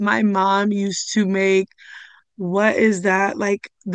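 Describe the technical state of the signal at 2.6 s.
At 2.6 s the speech signal is intact, with no audible fault.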